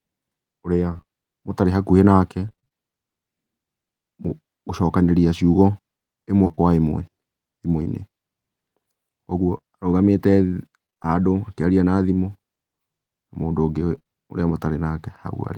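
From 0.93 to 1.06 s, just before "ũtarĩ hakuhĩ nake", the speech turns choppy and robotic. This is repeated packet loss: three gaps of up to 27 ms in quick succession, each bridged by extending the last sound, so about half the stretch is synthetic. The same fault returns right after "ũtarĩ hakuhĩ nake" at 2.49–2.73 s with six gaps, at 6.45–6.59 s with four, at 10.87–11.07 s before "handũ akĩaria" with five, and at 13.95–14.07 s with three. Each burst leaves a choppy texture with pieces missing.

Short concealed packet loss occurs at 7.83–7.87 s, and then twice back to back at 9.57–9.61 and 9.61–9.65 s. Each is roughly 20 ms of audio that never arrived. The decoder continued the preceding sound and then blended back into the real signal, which leaves a brief smear or wobble. At 9.6 s the two adjacent losses make that smear slightly longer.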